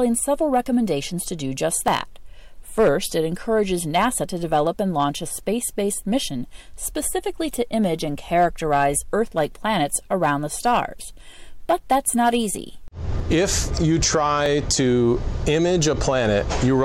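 At 1.88 s and 14.46 s the sound jumps, likely a dropped buffer (overrun) losing roughly 20 ms and 10 ms; waveforms splice abruptly, spectrograms show a thin vertical broadband line.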